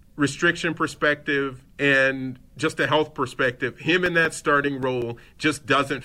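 CD scratch ticks run from about 4.06 to 5.59 s: nine short ticks, roughly six a second, the longest about 5 ms. A blemish on the disc destroys more data than error correction can rebuild once per revolution, so the player patches or mutes those samples in the speech.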